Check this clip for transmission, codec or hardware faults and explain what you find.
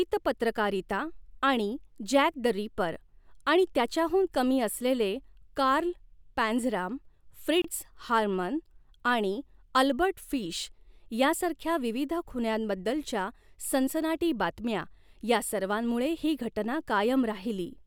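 One codec fault is audible: a gap at a join of encoded pieces in the speech. From 7.62 to 7.64 s, a gap of about 26 ms cuts into continuous sound, with its edges smeared by the codec. Two separately encoded pieces were joined untrimmed, so one run's padded final frame and the next run's start-up delay both remain as dead air. The speech resumes exactly where it stopped, with nothing lost. That sets it apart from a packet dropout, which removes audio rather than inserting silence.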